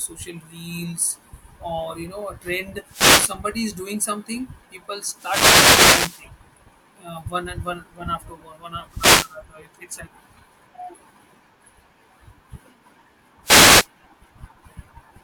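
A speech recording carried over an analogue FM wireless microphone, hit four times by wireless microphone noise bursts: 2.87 to 3.38 s, 5.13 to 6.28 s, 8.88 to 9.39 s and 13.43 to 13.88 s. Each is a brief swish of static over the voice, the longest lasting over a second. The cause is multipath fading, where reflected copies of the radio signal cancel the direct one at the receiver, so its noise floor climbs.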